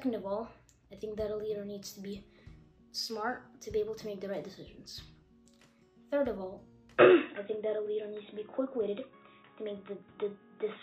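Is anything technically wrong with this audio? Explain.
Yes. From about 6.98 s to the end, the sound turns dull and boxy, with nothing above 3.8 kHz and a faint new noise floor. It's likely an input switched to a poorer device, whose narrower band cuts the top, with no gap and no real level jump.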